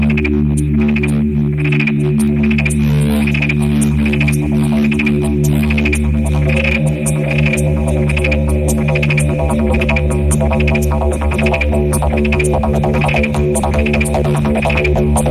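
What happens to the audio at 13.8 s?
At 13.8 s the audio falls within a run of clock drift buffer slips lasting from 0.80 to 14.09 s, heard as a regular click while there is signal. They repeat every 1.48 s. Two clocks likely differ by around 100 ppm, so every so often a few samples get dropped or repeated.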